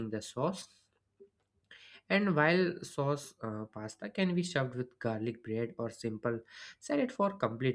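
Speech recording; no technical faults can be heard anywhere.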